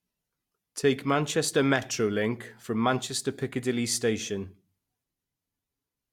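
Speech recording with no audible technical faults.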